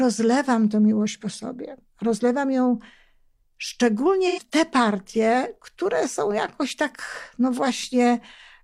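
From 4.27 to 4.40 s, AAC frame loss with concealment. The decoder rebuilds the gap, which fits two lost frames, from the previous spectrum, leaving a brief smeared, phasey patch.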